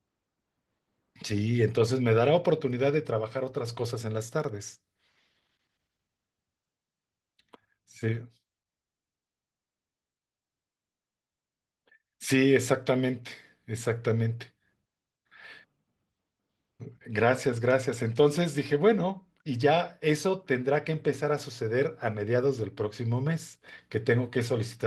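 Nothing in this speech recording points to a technical fault, and the Opus voice compression it passes through, at 24 kbps in hybrid mode with fullband bandwidth, leaves only light coding traces on the sound.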